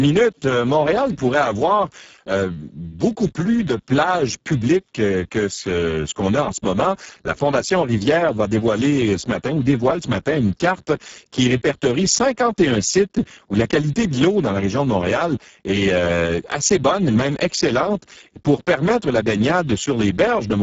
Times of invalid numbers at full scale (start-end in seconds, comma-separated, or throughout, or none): none